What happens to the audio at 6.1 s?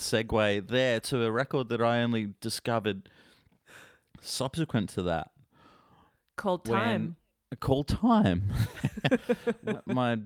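Nothing goes wrong at 6.1 s; the speech continues without any dropout, click, glitch or other audible fault at that point.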